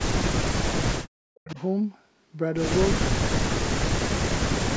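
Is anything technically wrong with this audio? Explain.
Yes, there are two problems. From 0.22 to 1.57 s and again from 3.20 to 4.02 s, the speech dips sharply, falling by up to about 40 dB, for roughly a second in total the first time and under a second the second time. This is likely speech suppressed in double talk: the echo canceller could not tell this talker from loudspeaker echo while both sides spoke, so it turned everything down.

Between 1.46 and 1.66 s, a faint repeat of the speech trails in about 437 ms behind the original, around 20 dB below it. This is likely an echo leak, where one side's echo canceller let some of its loudspeaker pickup back into the line. The band stopping at 8 kHz is normal for call microphone processing.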